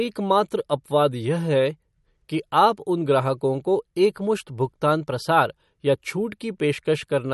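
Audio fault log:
Throughout, MP3 compression: no content above 11.8 kHz, and plainly audible watery, swirling artefacts with smeared onsets, likely from an MP3 encoder short of bits cutting the treble and switching weak frequency lines on and off between frames, consistent with roughly 48 kbps.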